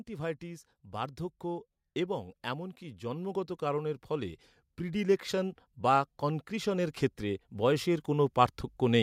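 From about 0.06 s right through to 8.98 s, you can hear automatic gain rising. The AGC decided the input was too quiet and kept pushing its gain up, roughly 15 dB in all, so the speech and the background noise swell louder together.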